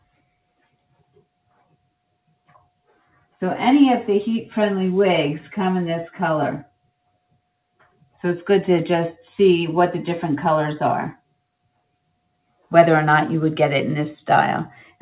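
Sound dips sharply from 1.51 to 1.86 s and again from 7.80 to 8.15 s, falling by about 17 and 18 dB: the noise suppressor mistook it for noise and cut it. The audio is band-limited to 4 kHz throughout by the call codec.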